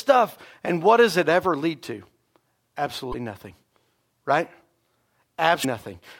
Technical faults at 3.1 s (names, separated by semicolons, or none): damaged data in a compressed stream